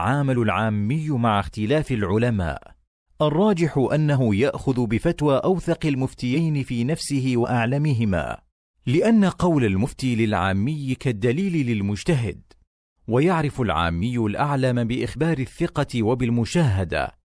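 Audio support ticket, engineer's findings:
No fault found on listening; no action needed.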